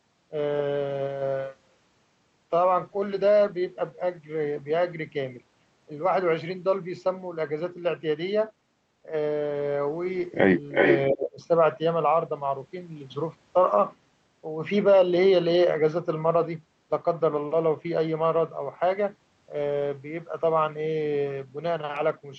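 From 10.71 to 10.99 s there is an echo leak: a delayed copy of the speech returns about 370 ms behind the original, at roughly the same level as the direct speech. The likely cause is a loudspeaker on the far end whose echo canceller failed to subtract what its microphone picked up, sending that residue back into the call.

Immediately after, from 11.1 to 11.4 s, the speech is suppressed in double talk. Over roughly 300 ms the level dips by about 25 dB at its deepest, so the voice sounds pushed down and partly swallowed before recovering. This likely comes from the echo canceller seeing both sides active at once, being unable to separate the local talker from the loudspeaker echo, and attenuating both. Throughout, the audio carries the band limit of an Opus call path, with content stopping near 8 kHz.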